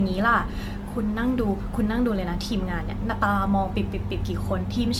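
Generation loss runs throughout: the speech sounds swirly, smeared and hollow, with blurred attacks and nothing above 17 kHz, most likely from about seven rounds of AAC-LC re-encoding near 96 kbit/s, each pass quantising on a shifted frame grid and compounding noise and spectral holes.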